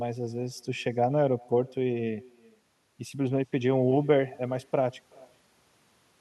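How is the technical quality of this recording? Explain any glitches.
The recording carries one fault that runs through the whole speech clip: echo with no canceller. Throughout, each phrase returns roughly 0.4 s later as a faint, thin copy about 27 dB down. The far end's loudspeaker is feeding its microphone, with nothing subtracting it. On a spectrogram, every syllable trails a weak, delayed duplicate; on the waveform, small delayed bumps follow each burst.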